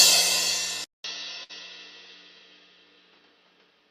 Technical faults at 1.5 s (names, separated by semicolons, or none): input switched to a poorer device; burst of packet loss